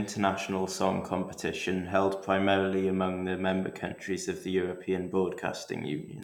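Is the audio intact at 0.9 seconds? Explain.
No. At 0.9 seconds, as throughout the speech, a steady USB whine sits at 8 kHz, roughly 40 dB below the voice. The bus's 125-microsecond microframe current pulses leak through power or ground, drawing a thin, unbroken horizontal line on a spectrogram.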